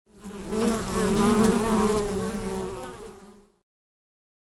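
A steady tick runs under the sound for the whole clip, about 20 per second and only while there's signal. That's a resampler restarted on every block: each 50 ms chunk got converted alone, which fits a 24 kHz to 48 kHz upsample, leaving an error at every seam.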